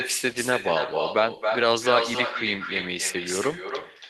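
Echo with no canceller runs through the whole recording: the far end's loudspeaker output reaches its microphone and nothing subtracts it. Every phrase of speech returns roughly a third of a second later, about 6 dB quieter, as a thinner shadow.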